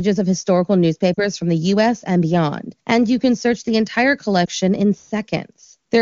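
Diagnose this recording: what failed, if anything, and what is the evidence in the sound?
Brief dips at 1.14–1.19 s, after "of historical", and 4.46–4.48 s, after "can search the entire", are lost AMR speech frames. Radio errors left the decoder extrapolating with fading gain.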